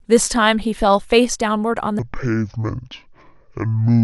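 A playback or editing stage likely ran the second half of the audio against the wrong clock, so from 1.99 s to the end there is a section at the wrong speed, played at 0.58 times its recorded rate. Because speed and pitch shift together, the speech abruptly drops by roughly ten semitones and stretches out, turning deep, slow and dragging from that moment to the close of the clip.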